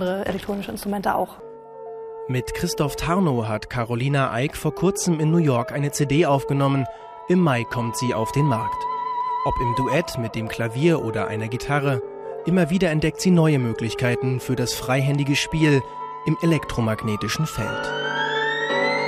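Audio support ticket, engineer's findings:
No audible faults found; nothing to escalate.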